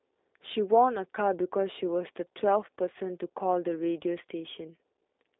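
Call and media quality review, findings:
G.729 codec damage, whole clip: speech band-limited to roughly 300 Hz–3.7 kHz, empty spectrogram above 3.8 kHz. Rough, synthetic texture from rebuilt pulse excitation, consistent with an 8 kbit/s CELP path. Harmonics look smeared and patchy in 10 ms steps.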